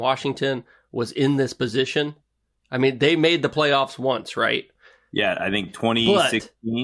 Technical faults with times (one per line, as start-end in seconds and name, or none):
none